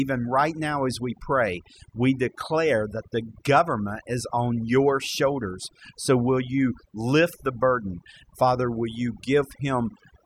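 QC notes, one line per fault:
Throughout: overdone noise removal, with the noise reduction set too hard so bands near the noise estimate are gated off, leaving twinkling residue.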